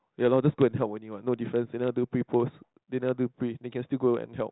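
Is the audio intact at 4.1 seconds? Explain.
Yes, the audio is intact at 4.1 seconds; the speech passes through the G.726 ADPCM telephone path, with nothing above about 3.9 kHz, and no fault at that moment.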